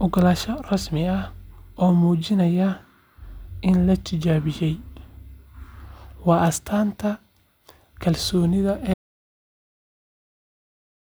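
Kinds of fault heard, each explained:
Loud pop: A single sharp pop lands at 0.31 s, peaking a few decibels above the speech, which continues beneath it. A brief voltage spike, likely from a plug, switch, static discharge or driver glitch, was added to the signal and shaped by the following circuitry.
Audio dropout to silence: At 8.94 s the speech cuts off mid-flow into silence, with no room tone, and stays silent to the end. The input was lost, likely through a disconnection, failed link or accidental mute, while recording continued writing silence.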